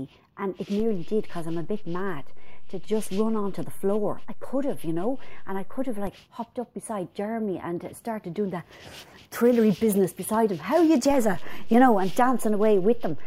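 Two DC steps shift the waveform's zero line: one at 0.80 s, holding at about -27 dBFS until it drops back at 6.07 s, and another at 11.10 s, about -25 dBFS, persisting to the end. Each jump lands as a low thump while the sound continues unaltered.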